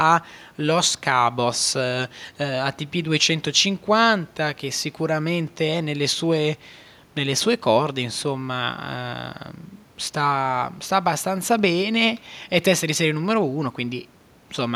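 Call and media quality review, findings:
No faults found in playback.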